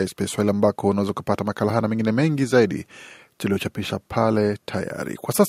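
Speech, with no audible faults.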